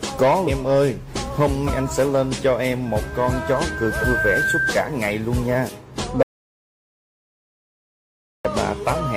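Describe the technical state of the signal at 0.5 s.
Compressed frames are skipped from 0.47 to 0.50 s. The decoder drops a short run of frames, about 150 ms of audio, which fits around four frames of roughly 43 ms. The audio jumps ahead by that amount at the join. A spectrogram shows a sudden content jump, and the waveform shows a discontinuity.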